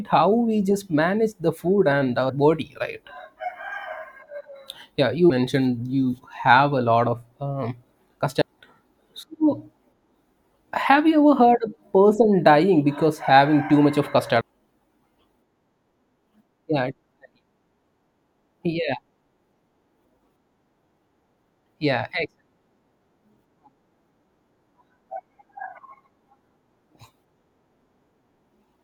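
Brief glitches cut into the speech at 2.28, 5.29, 8.40, 14.40 and 21.65 seconds. Each is damaged data in a compressed stream: corrupted bytes make the decoder misread a frame and lose sync, and it searches for the next frame header.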